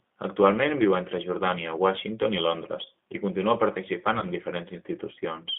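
From start to end the speech runs through a G.729 codec, which fits the G.729A variant at 8 kbit/s. The line band spans roughly 200 Hz to 3.6 kHz, so the speech loses its low body and much of its upper sibilance. Each 10 ms frame is rebuilt from a vocal tract filter, a pitch predictor and a handful of pulses rather than the original waveform. The codec damage is plainly audible as a rough, slightly synthetic grain.

From 4.19 to 4.26 s, just after "i continua", there is VoIP packet loss concealed by the speech codec. About 30 ms of audio is missing, which fits a single lost packet. The decoder fills the gap by extending its last pitch and filter state at falling gain, so the sound smears into a brief, fading stretch. Because each frame depends on the one before, the speech stays weak and distorted for several tens of milliseconds after the stream resumes.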